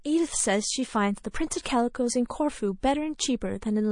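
Throughout, the speech sounds watery, with swirling gaps on a spectrogram. That is likely MP3 compression at a low bitrate, around 40 kbps. Pre-echo comes at 1.31, 1.63, 2.28 and 2.80 s. A brief hiss, 23 to 35 ms long and about 12 to 23 dB up, smears ahead of each attack. It shows as a noise smudge before the waveform's onset, which fits long transform blocks with no switch to short ones.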